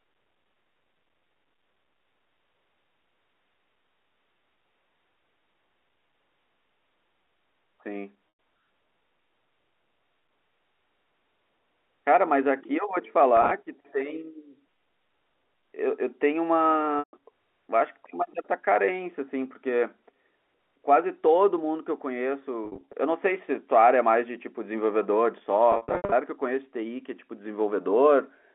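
Packet loss with pitch repetition at 8.32–8.34, 13.37–13.51, 16.99–17.13, 22.65–22.93 and 25.72–26.12 s: missing stretches of the speech are patched by looping the last pitch period, heard as a brief buzzy hold. At 25.72 s a 70 ms run fades toward silence before the speech cross-fades back.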